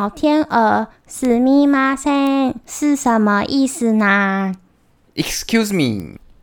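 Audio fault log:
1.25 s, 2.27 s and 6.00 s, bit error spike. Each is one sharp tick over the speech, unrelated to it. A single flipped bit throws one to three samples far off and straight back. The jump reaches about -9 dBFS, about -15 dBFS at 6.00 s, heard as broadband.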